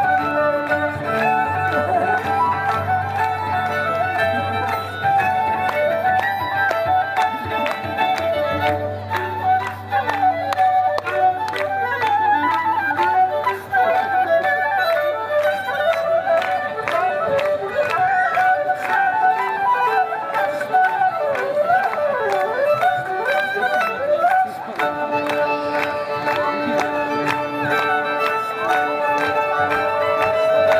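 Loudspeaker feedback squeal runs from 29.45 s to the end at 30.80 s. The microphone picks up its own loudspeaker, and the loop gain exceeds one at 640 Hz. That tone swells over about a second until it sits clearly above the sound.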